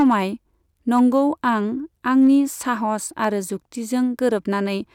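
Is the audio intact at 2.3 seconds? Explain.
No. Hard clipping runs from 2.2 to 2.35 s. The speech peaks exceed what the signal path can pass by about 1 dB. Their tops are cut flat, adding high harmonics. This light overload is heard as brief crackle on the loudest moments.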